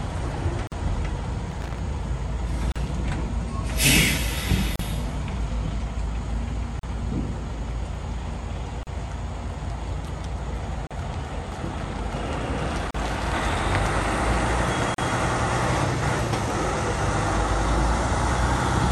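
A gap at a join of encoded pieces first opens at 0.67 s, lasting 47 ms. Each piece was encoded separately and joined with its encoder delay and final-frame padding left in. The sound drops out abruptly, then resumes where it stopped. On a waveform this is a flat stretch with smeared edges, and on a spectrogram a narrow vertical blank band across all frequencies.

From 1.51 to 1.79 s comes loose connector crackle. A worn or dirty contact repeatedly made and broke the connection, chopping the signal into an irregular burst of scratchy crackle. The waveform shows jagged spikes and dropouts, and the spectrogram shows scattered broadband vertical streaks.

The join gaps then recur every 2.0 s, each about 38 ms long, at 2.72, 4.76, 6.79, 8.83, 10.87, 12.91 and 14.94 s. The steady spacing gives regularly spaced blank slices through the spectrogram.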